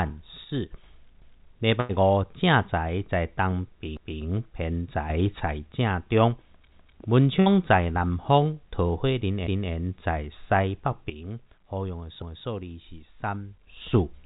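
Sudden gain jump at 0.44 to 0.84 s: speech and background noise drop together by about 6 dB, likely a gain setting applied instantly without a ramp.

Overlapping chunks at 1.22 s: a 250 ms stretch plays twice as one chunk starts before the previous ends, giving a stutter that recurs every 2.5 s, at 3.97, 6.72, 9.47 and 12.22 s.

Burst of packet loss at 1.80 to 1.92 s: the last sound is stretched and fades into a brief buzz or hiss, then speech resumes with about 90 ms missing. A second burst at 7.40 to 7.49 s drops about 60 ms.

A second sudden gain jump, at 5.10 to 5.40 s, raises everything by about 6 dB. A third, from 11.10 to 13.67 s, cuts the level by about 11 dB.

Throughout, nothing is heard above 4 kHz, which fits a narrowband call codec such as G.711 A-law.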